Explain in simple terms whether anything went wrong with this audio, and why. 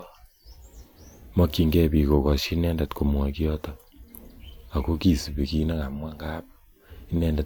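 Nothing went wrong here; the recording holds up throughout.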